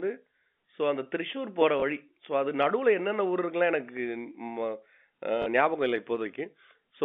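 Packet loss with last packet repeated: the receiver lost audio and replayed the previous packet, once at 1.8 s (20 ms, which fits one 20 ms packet) and again from 5.42 to 5.46 s (40 ms). The single repeat gives a small blip, and the longer gap gives a brief robotic stutter.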